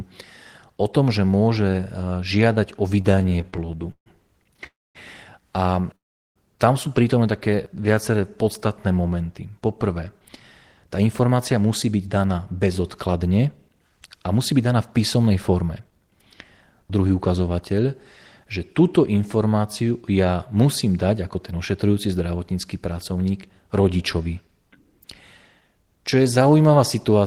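From 3.01 to 4.67 s, packets kept arriving late or more slowly than they were played, so the jitter buffer repeatedly ran dry. This produced repeated stalls (stutter): 19 separate gaps, the longest 144 ms, where the receiver extended the last sound until data returned. In total 358 ms of fill was inserted, about 22% of that span. Nothing was lost, but the speech drags and stutters.

Packets were likely held up in transit twice more, emptying the buffer each time. Each event is a call audio freeze. The first, at 4.67 to 4.97 s, inserts 281 ms, of which 230 ms is silence. The second, at 5.96 to 6.38 s, inserts 398 ms, 380 ms of it silent. Each time the speech resumes exactly where it stopped, so a pause has been added rather than anything removed. The delay grows by 281 ms and then by 398 ms.

From 7.50 to 8.59 s the buffer was running low or had just raised its target delay. To build up a reserve, the receiver repeated individual pitch periods or fragments of pauses many times in a row, adding 104 ms. 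This is a jitter buffer slow-down. The speech plays at about 91% speed with unchanged pitch, so sounds are drawn out.

From 10.20 to 17.35 s the buffer held more audio than its target. To shrink the delay, the receiver cut out short pieces of one or a few pitch periods, over and over, removing roughly half a second in all. This is a jitter buffer speed-up. The speech runs at about 108% speed with its pitch unchanged, fast enough to sound hurried.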